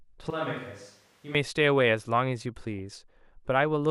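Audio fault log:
0.30–1.35 s, switch to a distant microphone. The sound turns hollow and roomy at once, with thinner bass. The level falls by about 10 dB. Room noise rises to roughly 30 dB below the speech. The likely cause is the close microphone dropping out, leaving a far one.
2.74–2.80 s, DAB burbling. A short burst of noise blips sits over the speech. Bit errors have slipped past error correction into the coded audio. Wrong samples put short noise blips in single frequency bands. This fits a bit error rate near 0.1 percent.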